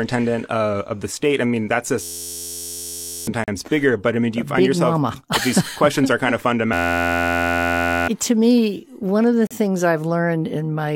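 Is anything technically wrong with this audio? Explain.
Yes. System hang loop at 2.03–3.27 s, after "state I mean that", and at 6.73–8.08 s, between "questions are kind of" and "to me one of". A frozen system let the hardware replay one 11.6 ms buffer, which fits 512 samples. The result is a steady 86 Hz buzz that replaces about one and a half seconds of speech each time.

Gap between stream segments at 3.44 s (38.5 ms) and 9.47 s (37.4 ms), after "me one of the". Mismatched timestamps between 2-second segments leave holes that the player fills with silence. These are hard-edged dropouts, and no speech is lost.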